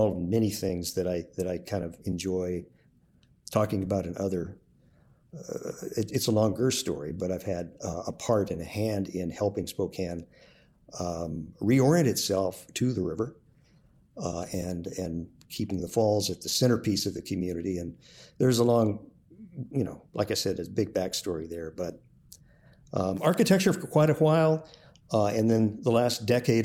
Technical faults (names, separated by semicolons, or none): none